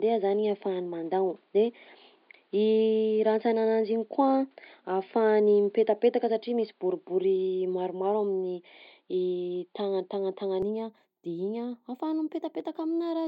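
From the start to 10.62 s the speech sounds dull and boxy, with nothing above 5 kHz, and a faint background noise sits far below it, roughly 45 dB down. At 10.62 s it clears abruptly with no gap, and the level shifts by around 5 dB. This is likely an input switched to a poorer device, then back. On a spectrogram the energy is cut off flat at 5 kHz until 10.62 s, and the waveform's envelope steps there.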